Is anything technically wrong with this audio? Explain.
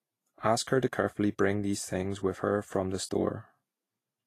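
Yes. Throughout the speech there is plainly audible damage from lossy coding, most likely Vorbis compression at a low setting, which fits a rate of around 33 kbps. Nothing is left above 14.2 kHz. The encoder keeps a smooth outline of the spectrum and quantises the detail on top of it very coarsely. Fine treble structure is replaced by noise of similar energy. The result is hissy and grainy, with roughened tones and softened consonant attacks.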